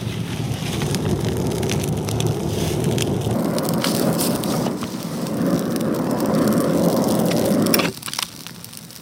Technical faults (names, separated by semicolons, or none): section at the wrong speed